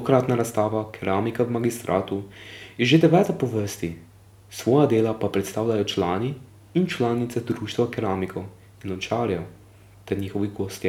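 Listening to the speech recording, nothing stood out as a technical problem at any point.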